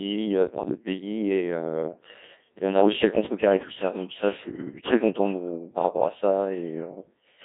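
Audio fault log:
Throughout, Codec 2 vocoder: the speech is rebuilt from sine waves using only pitch, voicing, energy and a coarse spectral envelope. The result is heavily robotic and buzzy, band-limited to roughly 150 Hz to 3.7 kHz, and its coarseness fits a 1.6 kbit/s mode.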